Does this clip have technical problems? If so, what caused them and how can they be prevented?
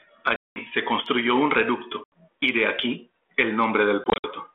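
Yes. Packet loss on an ADPCM call: silent holes at 0.36–0.57 s (about 200 ms, before "se construyó un"), 2.04–2.22 s (80 ms, before "y de aquí"), and 4.04–4.28 s (several short dropouts up to 60 ms). The decoder's predictor and step size drift from the sender's, so speech resumes with brief distortion. Prevent it with jitter buffering, packet-loss concealment, or a more reliable network path.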